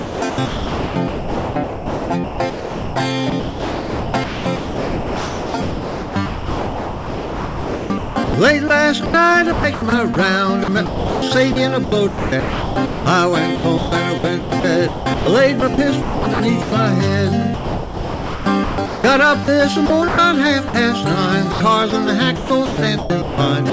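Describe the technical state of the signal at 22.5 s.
At 22.5 s you're in the middle of a stretch of sound chopped by the voice detector, running from about 21.52 s to the very end at 23.72 s. The audio keeps cutting in and out, with about 0.67 s of it swapped for synthetic hiss in total. That's likely the sender's detector toggling transmission and the receiver filling the gaps with comfort noise. Underneath, the G.722 call path holds everything below 8 kHz.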